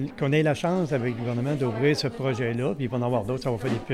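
No technical faults can be heard anywhere in the clip. Nothing in the sound points to a fault at any moment.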